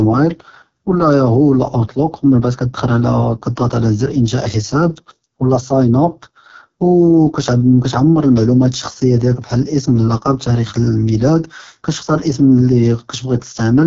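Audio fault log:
throughout: AMR wideband (HD Voice) codec. The speech is rough and raspy, with heavy damage that fits the lowest 6.6 kbit/s mode. A spectrogram shows nothing above 6.9 kHz, a smeared noise band above 6.4 kHz, and blurred, patchy harmonics below.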